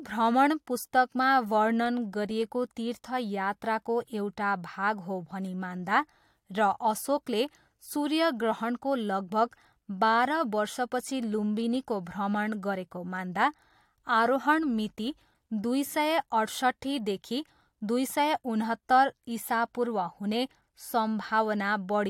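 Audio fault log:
No faults detected in the speech recording.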